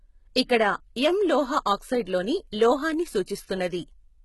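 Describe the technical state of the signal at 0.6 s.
At 0.6 s, and across the whole clip, the speech carries likely HE-AAC compression damage. Everything above 11.8 kHz is gone, and the upper band sounds rebuilt by copying lower bands upward, so sibilants come out gritty and lispy, which fits roughly 16 kbps.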